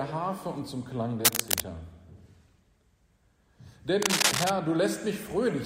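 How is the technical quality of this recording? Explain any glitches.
Two glitches stand out: bursts of cable scratch noise from 1.25 to 1.63 s and from 4.02 to 4.51 s. Each is a harsh, uneven rustling that sits a few dB above the signal, and it is likely caused by a worn cable or connector shifting and rapidly changing contact resistance.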